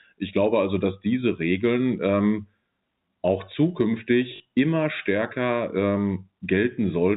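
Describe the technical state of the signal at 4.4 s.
Packet loss with last packet repeated, 4.36 to 4.4 s: 40 ms went missing and the previous packet was replayed, causing a short, robotic stutter before "immer stärker".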